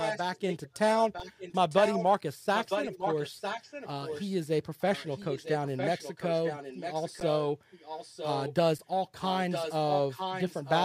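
Echo leak runs through the speech at 0.0 to 0.78 s, 0.96 to 2.05 s, 2.55 to 4.35 s, 4.8 to 7.37 s, 7.71 to 8.55 s and 9.2 to 10.83 s. A delayed copy of the voice trails the original by 954 ms, about 5 dB below it, dropping to about 10 dB below between 4.8 and 8.55 s. This is likely a far-end loudspeaker feeding its microphone, with the echo canceller letting part of that pickup return down the line.

Underrun with held sample cuts in at 1.2 s for 5 ms and again at 4.61 s for 4 ms. At each point the output buffer ran dry, and the converter froze on its last sample value, so the waveform goes flat. Live audio was lost during each gap.

At 7.2 s a 10 ms held-sample underrun lands inside the echoed stretch, and at 8.78 s a 7 ms one follows. Both flatten the waveform.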